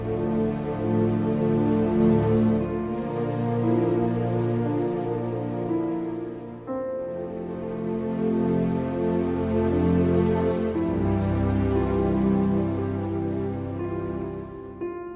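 No dropouts, distortion, noise bursts or timing errors turn up anywhere in the recording.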